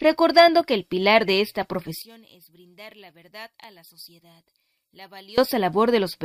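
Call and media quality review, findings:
One channel inverted, 2.02–5.38 s: level drops about 24 dB in mono, centre content collapses to a faint residue. Likely polarity flip; unlike a dropout, difference signal survives.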